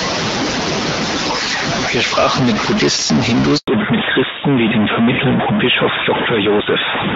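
From the first moment to the last, a distortion rides on the speech, and the pauses between phrases are filled with a gritty hiss rather than falling quiet. This is the stuck bit fault, likely one data line or converter bit held permanently at 0 or 1, so roughly half the samples land off by that bit's weight. Unlike ordinary clipping, which only roughens the loudest peaks, this grit stays in the silences.

At 3.58 s the speech dies away within a few tens of milliseconds and stays silent until 3.68 s. This 100 ms handover gap is where the call switched networks and no speech frames arrived during the changeover, so whatever was said in that window is lost. A dropped packet on an otherwise steady link leaves a much shorter hole, often smoothed over by concealment. This silence is a clean, complete cutout that lines up exactly with the change in tone that follows.

From 3.68 s to the end, the call has fallen back to narrowband. 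Up to that point the wideband HD Voice coding carried the voice with only light codec damage. After the switch, everything above 4 kHz is gone, and the voice turns duller, boxier and rougher, the sibilants losing their crispness. A simple low-pass or muffled microphone would not arrive with a gap in front of it. Here the band limit starts exactly where the handover silence ends, which marks it as a codec change.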